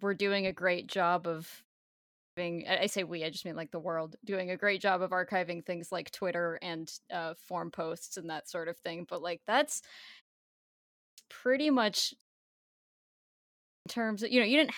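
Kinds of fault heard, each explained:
Clipped start after a pause: the output device idles during silence and needs time to wake and lock again, so the opening of the next phrase is swallowed. Here about 0.44 s is lost at 1.93 s, 0.48 s at 10.7 s and 0.52 s at 13.34 s, after pauses of 0.36, 0.57 and 1.21 s. On a waveform each phrase starts at full amplitude with no rising onset, and a spectrogram shows energy switching on abruptly across all bands.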